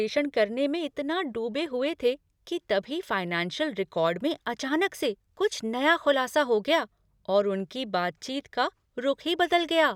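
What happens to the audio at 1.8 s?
Nothing goes wrong at 1.8 s; the audio plays through that moment intact, with no dropout, click or distortion.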